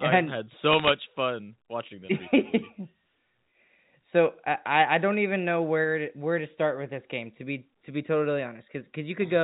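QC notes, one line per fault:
0.72–0.90 s, bit errors on a digital phone line: a short burst of sharp ticks and crackle sits over the speech, ending just before "fun watching them recently". Flipped bits in the 8-bit logarithmic telephone samples corrupt single samples, and each hit on a sign or high-order bit jumps the waveform into a click. The density suggests an error rate somewhat under one percent. The underlying G.711 band-limiting below 4 kHz is unaffected.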